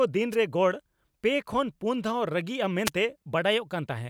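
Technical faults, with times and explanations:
0.31–0.36 s and 2.85–2.90 s, wireless microphone noise hit: the analogue radio link briefly fades, about 45 ms each time, as reflections cancel the signal, so receiver hiss swells over the speech as a short swish. A spectrogram shows a thin broadband vertical stripe, and the waveform a fuzzy burst.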